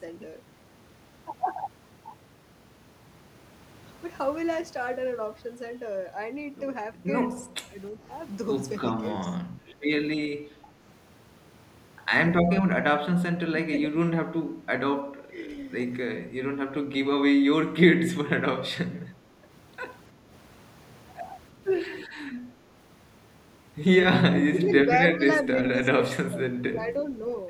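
The speech dips and breaks up at 7.45–8.0, 9.27–9.35, 10.62–10.68, 12.62–12.85, 13.51–14.18, 15.03–15.4, 16.2–16.34 and 24.29–27.12 s, falling by roughly 5 to 20 dB in short bursts. This is speech suppressed in double talk, likely an echo canceller turning the talker down because it mistook the voice for loudspeaker echo while the far side spoke.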